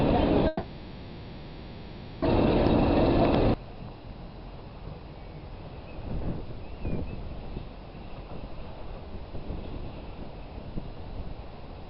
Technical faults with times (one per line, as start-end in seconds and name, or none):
0.47-2.23 long network dropout